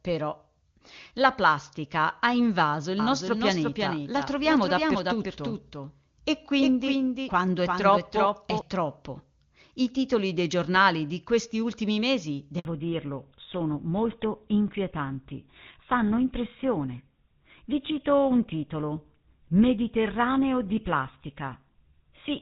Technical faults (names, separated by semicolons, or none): doubled audio track; handover gap; fallback to narrowband